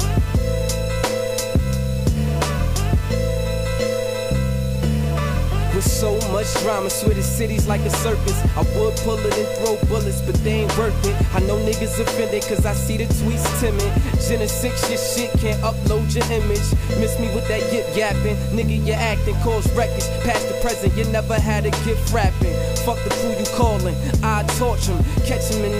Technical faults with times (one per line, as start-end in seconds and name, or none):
0.00-25.79 low bit depth without dither